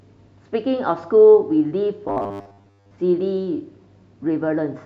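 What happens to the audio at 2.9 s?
At 2.9 s the speech is near the end of a robotic sound from repeated short buffers (2.08–2.96 s): likely 10 ms chunks looped, giving a 100 Hz buzz, with a rigid harmonic comb on the spectrogram and identical repeating waveform cycles.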